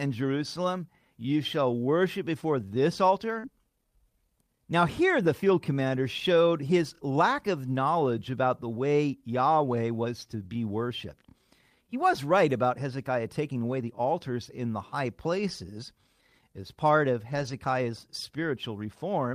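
At 3.39 s, just after "shall worship before this", there is short concealed packet loss. About 40 ms of audio never arrived in time, and the receiver extended the preceding sound to cover the hole. It is heard as a brief smear before the signal rejoins.

The tail of that gap, 3.43 to 3.45 s, is a lost packet rebuilt from error correction. The decoder played a low-bitrate backup copy carried in the following packet, so that stretch is rougher and noisier instead of extrapolated. The same fault recurs for 20 ms at 15.37 to 15.39 s and for 120 ms at 17.31 to 17.53 s after "as part of", which fits six separate lost packets and gives several short coarse, grainy patches. It recurs once more for 20 ms at 18.43 to 18.45 s.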